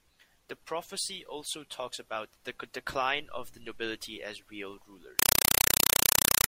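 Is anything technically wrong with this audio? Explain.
Yes. From 5.19 s, just after "the nobility as real", to 6.48 s, the speech becomes very loud, chattering static: 4 ms noise bursts repeating 31.25 times a second. This is a compressed stream played as audio. Undecoded AC-3 data, fitting a 192 kbps stream, is treated as samples, so each frame plays as a burst of noise followed by silent padding.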